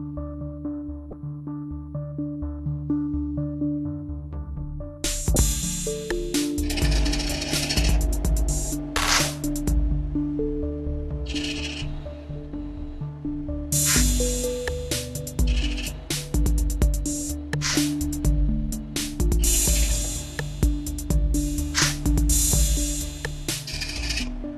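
Damaged data in a compressed stream strikes twice, at 1.10 to 1.13 s and again at 5.33 to 5.36 s. Corrupted bytes leave the decoder unable to read those frames, so it loses sync and hunts for the next valid header. Each dropout comes out as a brief chirp, squawk, click or short hole lasting about 30 ms.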